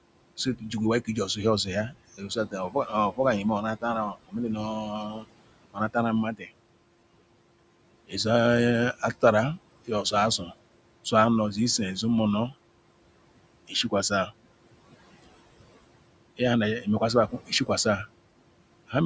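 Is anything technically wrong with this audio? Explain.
Yes. This speech clip has two related problems, both caused by the noise suppressor.

Noise suppressor artifacts run through the whole clip. The suppressor pulls down bands it judges to be steady noise by about 21 dB in the gaps. The room noise, sitting about 15 dB below the speech, falls away between phrases and comes back underneath them as each frame's estimate changes.

Speech cut by the noise suppressor occurs six times: 0.37–3.19 s, 3.77–6.5 s, 8.07–8.25 s, 9.85–11.12 s, 13.68–14.31 s and 16.37–17.69 s. In each span the suppressor mistook quieter parts of the speech for noise and attenuated them along with the background, by about 13 to 20 dB at the deepest points. Only short portions inside each span are hit, from about a tenth of a second up to roughly a second in the 3.77–6.5 s span. Those parts sound swallowed or faint.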